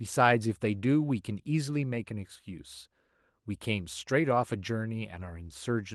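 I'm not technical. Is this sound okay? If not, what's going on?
Yes, this sound is okay, and nothing in it is going wrong.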